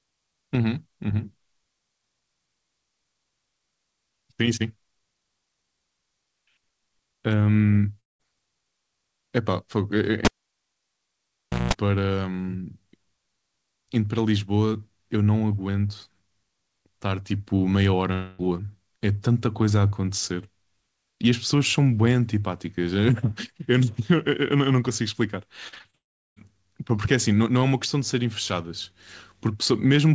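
At 8.00 s, a stretch of about 0.2 s most likely never arrived over the network, a long network dropout. The receiver stretches the last sound into a fading buzz, then near silence, and the speech resumes at 8.21 s with that piece gone.

From 10.25 to 11.74 s, a live cable is pulled and plugged back in. It opens with a pop, then about 1.4 s of near silence, broken by a short burst of 60 Hz mains buzz lasting about 0.19 s as the tip makes contact, and a second pop as the signal returns.

At 18.13 s what is likely a second long network dropout hides about 0.26 s of audio. Here concealment fills the entire hole, so the last sound is smeared out as a buzzy continuation up to 18.41 s, and there is no silence before the audio comes back.

Between 25.69 and 25.95 s, packets are lost repeatedly: five gaps, the longest 37 ms, with nearly half the span patched by repeating what came just before. The speech turns choppy, with bits missing, all within the G.722 call band that has nothing above 8 kHz.

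This runs straight into what is likely a third long network dropout from 25.95 to 26.38 s, about 0.42 s lost. A brief fading tail gives way to silence before the audio returns.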